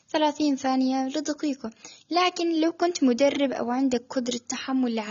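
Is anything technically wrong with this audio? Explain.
Yes. Across the whole speech clip the top end is dull and the detail smeared, with a warbly, fizzy texture on sibilants and held sounds. That's plainly audible and most likely AAC compression, AAC-LC specifically. The encoder quantises the spectrum against a hearing model, and with too few bits it lowers the cut-off and thins or patches bands, which fits a low bitrate in the region of 24 kbps.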